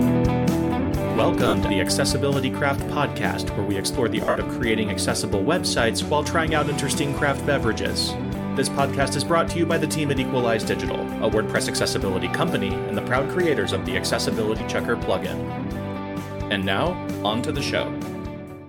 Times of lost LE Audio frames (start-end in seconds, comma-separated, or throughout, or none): 1.48-1.54, 4.25-4.36, 14.58-14.60